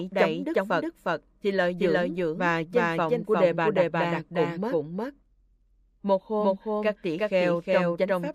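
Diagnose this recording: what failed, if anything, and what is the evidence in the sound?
Every event in the sound is followed by a second, equally loud, full-band copy almost half a second later, with no decay or room colour, throughout the clip. This is a doubled audio track, likely from the signal being captured twice, once through a slower driver or buffer path, and mixed back together out of step.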